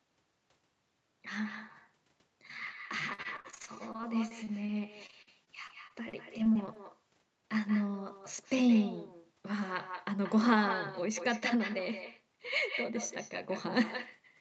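From the start of the speech to the end, every phrase is trailed by a fainter, thinner copy of itself, roughly a fifth of a second behind and about 13 dB down. This is echo with no canceller: the far end played the call through a loudspeaker, its microphone captured that playback, and no echo cancellation removed it before it was sent back. The delay corresponds to the network round trip.

Between 3.13 and 4.70 s, repeated packet loss gives the speech a choppy, robotic quality. The span is full of short dropouts, the longest about 50 ms. The receiver covered each one by stretching the preceding sound, and about 21% of the span is concealed this way. That adds up to roughly 330 ms of patched audio and 240 ms that are simply missing. The same fault returns from 5.06 to 6.77 s, with about 16% of the span concealed, gaps up to 44 ms, roughly 280 ms filled and 220 ms missing. Within each stretch the gaps come one after another, so the concealment never settles, and this produces the stuttering sound. 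The Opus coding path limits the audio to 8 kHz, so the echo and the patched fragments alike lack any top end above that.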